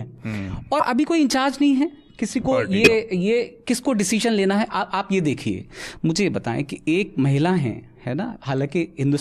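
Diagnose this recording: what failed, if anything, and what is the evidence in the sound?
Jumps ahead in the speech at 0.79–0.83 s and again at 5.60 s, each dropping about 20 ms of audio. This is compressed frames skipped, at the codec or storage stage: whole frames were lost or rejected as damaged, and the audio skips ahead by their length.

A short, loud error at 2.84–2.88 s, peaking around -5 dBFS and lasting roughly one frame. This is a corrupt frame decoded: flipped bits were decoded anyway, so misread gains and codes placed energy at the wrong frequencies for that frame's length.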